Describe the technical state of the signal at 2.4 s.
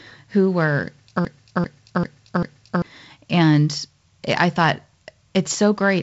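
At 2.4 s the audio is inside a broken-record loop running from 1.25 to 2.82 s, just after "who were": a 0.39 s fragment plays four times back to back, likely because the stream stalled and resent its last buffer. Unlike an echo, each repeat is identical and undecayed, and the audio due in that span is lost.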